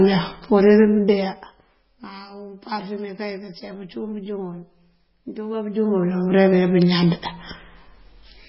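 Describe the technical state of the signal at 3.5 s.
At 3.5 s the speech carries MP3 compression damage, present throughout: nothing above 5.5 kHz, with watery, swirling artefacts, likely from a very low bitrate near 16 kbps.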